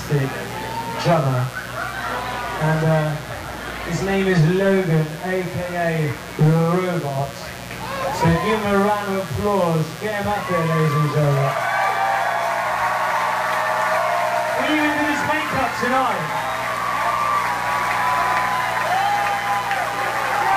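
Mains buzz runs through the whole clip, a steady raspy 60 Hz buzz sitting fairly high, roughly 15 dB below the audio. Sharp switching spikes from a dimmer, rectifier or unshielded cable, twice per cycle, spread harmonics up into the kilohertz range.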